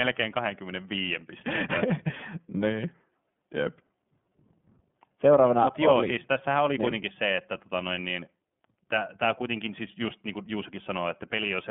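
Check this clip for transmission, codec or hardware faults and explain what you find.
One fault runs through the whole clip: iLBC codec coding. The speech is narrowband, with nothing above 3.7 kHz. Each 30 ms frame's excitation is coded independently, which fits the 13.33 kbps mode. The damage is plainly audible as a rough, synthetic edge.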